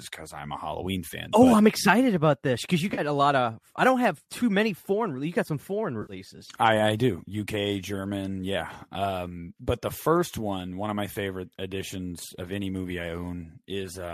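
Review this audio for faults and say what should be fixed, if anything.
AAC frame loss with concealment: the decoder lost short runs of frames and rebuilt them from the last good spectrum. At 2.90–3.01 s, after "about this because you", about 60 ms went missing across 80 ms, the longest gap around 40 ms. At 6.02–6.13 s, before "I I do", about 70 ms was lost. Both gaps sound like brief smeared, noisy patches. Each loss fits several 10 ms frames of what is likely a low-delay AAC-ELD stream. Adding forward error correction or a larger jitter buffer on the link would stop these frames from being dropped.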